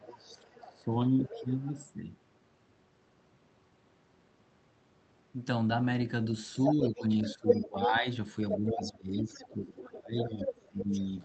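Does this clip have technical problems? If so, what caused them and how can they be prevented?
Yes. Speech suppressed in double talk shows up from 0.0 to 1.7 s and again from 6.75 s to the end. The speech dips, by up to roughly 20 dB, while the far side talks too, likely because the echo canceller couldn't separate the two and ducked everything. A double-talk-robust canceller, or headsets, would prevent it.

The other side's voice leaking through runs from 0.18 to 1.85 s, quietly, then from 6.45 s to the end, nearly as loud as the speech. The likely cause is loudspeaker playback the echo canceller only partly removed from the mic. Headphones or better echo cancellation would keep it out.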